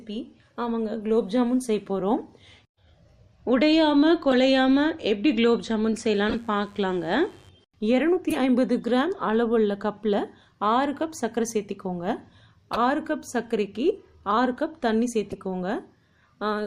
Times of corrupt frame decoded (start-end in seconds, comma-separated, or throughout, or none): 4.31-4.34, 6.29-6.35, 8.30-8.37, 12.73-12.79, 14.32, 15.30-15.34